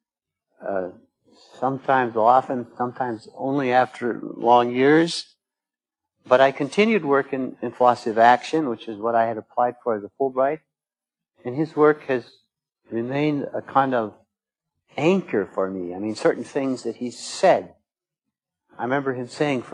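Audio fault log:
No faults were detected in this clip.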